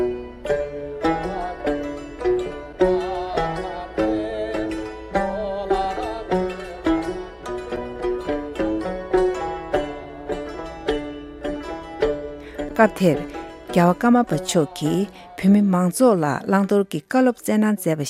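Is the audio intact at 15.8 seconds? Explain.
Yes, the audio is intact at 15.8 seconds, with no dropout, distortion, glitch or other technical fault at that point.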